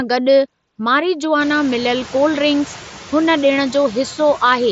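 A noise suppressor runs through the whole clip, estimating steady noise band by band and pulling it down by only about 3 dB, so the room noise that rises around 1.5 s dips between phrases and swells under speech, leaving a residue.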